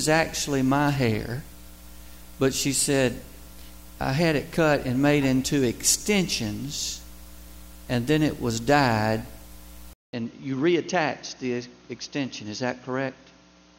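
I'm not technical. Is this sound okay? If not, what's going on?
No. At about 9.93 s there's a brief gap of roughly a fifth of a second, then everything turns duller, a bit quieter and slightly hissier until the end. That's an input switched to a poorer device, likely a different microphone that can't capture the crisp top end.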